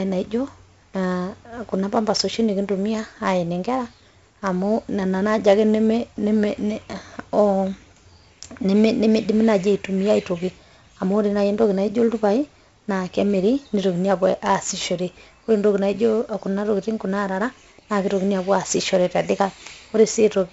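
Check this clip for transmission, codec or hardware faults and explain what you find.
One codec fault is present, and it runs through the entire clip.

4-bit ADPCM compression: each sample is coded as a coarse 4-bit step from a prediction, so the error tracks the speech level as heavy gritty hiss with roughened attacks. Nothing reaches above 7.7 kHz, which points to a 64 kbps stream.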